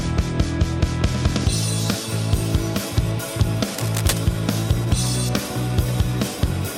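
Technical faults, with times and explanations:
3.68 to 4.23 s, cable scratch noise: for just over half a second a dense, uneven crackle and rustle rides on top of the sound, roughly 10 dB below it. The likely cause is a worn cable, plug or control being handled, its contact resistance jumping rapidly as it moves, which injects irregular bursts of noise into the signal that the ear hears as scratching.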